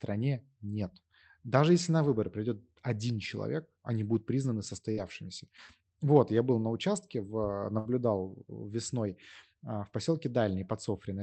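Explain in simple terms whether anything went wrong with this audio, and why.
Burst of packet loss at 4.91–5.00 s and 7.79–7.92 s: some data never arrived, so the last sound briefly holds and fades, then the speech skips ahead with a short piece missing.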